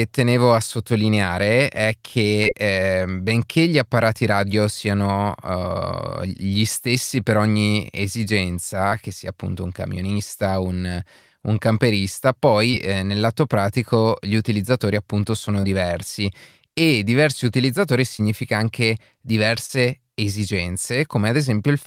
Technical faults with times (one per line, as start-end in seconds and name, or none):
2.43-2.47 short concealed packet loss
8.89-8.93 short concealed packet loss
12.71-12.75 short concealed packet loss
15.61-15.65 short concealed packet loss
18.17-18.21 short concealed packet loss
19.67-19.71 short concealed packet loss